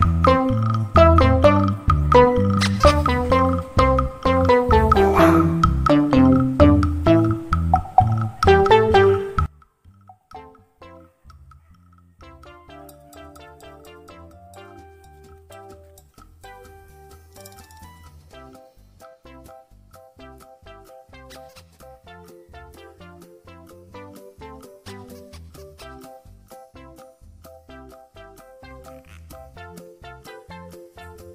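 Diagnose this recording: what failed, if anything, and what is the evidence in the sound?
One stereo channel has most likely been inverted in polarity, as from swapped conductors in the analogue wiring on that side. From 9.46 s to the end, the level drops by about 28 dB because whatever both channels share cancels when they are summed to mono. What survives is only the difference between left and right: a faint remnant with the centred content all but gone.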